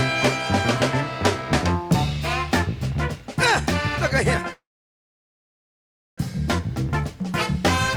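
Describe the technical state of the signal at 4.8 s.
Packets were likely held up and the jitter buffer ran dry, causing a call audio freeze from 4.53 to 6.2 s. The last sound trails off into about 1.56 s of silence, then resumes where it stopped, about 1.64 s late, with nothing lost.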